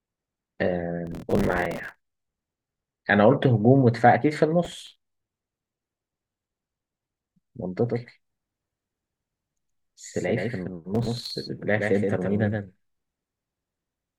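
Processor overload crackle first appears from 1.07 to 1.95 s and returns from 4.65 to 6.65 s. The processor is falling behind on buffers that each seem to last only a few milliseconds. At every missed deadline a scrap of earlier audio is replayed with hard edges. Dozens of these in the first stretch, and well over a hundred in the second, merge into a gritty tearing over the speech. The tearing stops as the load eases.

A doubled audio track begins abruptly at 7.89 s and runs to the end. A full-band copy of the speech trails about 150 ms behind the original and sits about 5 dB lower. It has no decay or room colour, so it sounds like a flat slapback rather than an echo. The likely cause is the same signal being captured a second time through a slower path. Inside this doubled section the crackle comes back briefly from 10.95 to 11.31 s, with a few dozen missed buffers.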